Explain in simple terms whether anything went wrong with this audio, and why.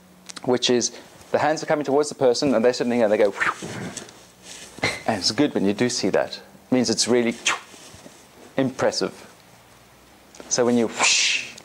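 Nothing stood out on listening; no part of the audio sounded as though anything had gone wrong.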